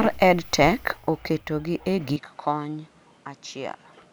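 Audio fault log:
2.16 to 4.13 s, input switched to a poorer device: the recording path likely changed over to a different, lower-grade microphone partway through, with no silence at the handover. From that point the speech carries nothing above 11.4 kHz, so it turns duller and less airy. It also drops in level by roughly 10 dB and picks up a new background noise sitting around 30 dB beneath the speech, because the replacement device brings its own narrower band, gain and noise floor.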